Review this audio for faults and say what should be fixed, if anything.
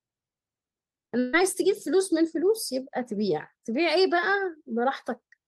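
Two short concealed packet losses occur back to back in this speech, from 1.05 to 1.09 s and from 1.09 to 1.13 s. Each drops about 20 ms of the stream, and the decoder fills the holes by extending the preceding sound for roughly 17 and 22 ms before crossfading into the real signal. The result is a brief smear or wobble lasting about eight hundredths of a second. A slightly deeper jitter buffer or forward error correction on the sending side would let these late or missing packets be recovered rather than concealed.

A burst of packet loss follows almost immediately, from 1.19 to 1.35 s. About 140 ms of audio never arrives, and the receiver covers roughly 137 ms of that gap by continuing the last sound and letting it decay. There is no dropout to silence; instead there is a held buzz or fading hiss, after which the speech resumes further along with the intervening material gone. Addressing the network path's congestion or adding redundancy that spans several packets would prevent losses of this length.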